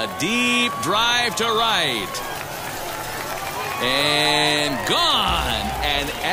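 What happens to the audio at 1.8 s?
Nothing goes wrong at 1.8 s: the audio plays through that moment intact, with no dropout, click or other fault.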